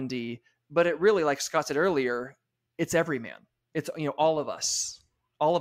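No technical faults can be heard anywhere in the speech recording. There is nothing in the signal to point to or time-stamp.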